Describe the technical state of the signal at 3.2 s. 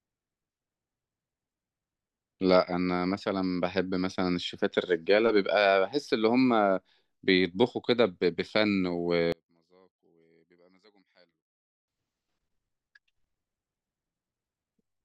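At 3.2 s the speech signal is intact, with no audible dropout, distortion, clipping or other fault at that point.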